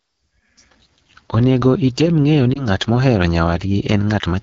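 Throughout the speech, the AMR wideband (HD Voice) codec leaves a rough, raspy texture. That grain fits one of the two lowest AMR-WB modes, around 8.85 kbit/s. The codec rebuilds the voice up to 6.4 kHz from a pulse-driven model of the vocal tract and fills the band above with shaped noise. At this rate the pulses are too coarse, so the roughness sits in the voice itself. Unlike plain narrowband telephone audio, the top end is still there, just synthetic and hissy.

From 2.54 to 2.67 s, right after "item ng'eyo", there is a lost AMR speech frame. The sound points to a single missing 20 ms frame. The decoder filled the gap by repeating the last good pitch and vocal tract settings at lower gain. It is heard as a brief dip or warble, with the voice returning weak or rough for a moment. It does not sound like a hard click or dropout, because the sound is smeared and faded rather than cut.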